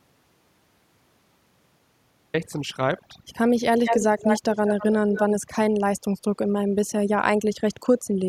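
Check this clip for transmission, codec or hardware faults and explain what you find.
Three faults are audible: overdone noise removal across the whole clip, a dropout to silence at the start, and two spells of echo leak.

Overdone noise removal runs from start to finish. A noise reducer set too aggressively pushes individual frequency bands down or out whenever they sit near its noise estimate, taking the quieter parts of the speech with them. The background breaks into twinkling, warbling specks and the voice turns watery or thin. Unlike a codec running short of bits, the artefacts follow the noise floor and the quiet passages rather than the loud ones.

The audio dropout to silence is already under way when the clip begins and lasts until 2.34 s. The gap is true silence with no room tone at all, which separates it from a quiet passage or a noise gate, where some background would remain. 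The likely cause is a lost input, such as a disconnected device, a failed link or an accidental mute, while recording or encoding carried on writing silence. Whatever was spoken before 2.34 s is gone.

Echo leak appears from 3.78 to 4.86 s and again from 5.13 to 5.21 s, as a copy of the voice delayed by 188 ms. In the first stretch the echo is about as loud as the speech. In the second it is roughly 10 dB below it. The likely cause is a far end playing the call on a loudspeaker, where the echo canceller failed to remove what its microphone picked up and sent it back. The fixed delay and the repeated copy of one voice distinguish it from room reverberation.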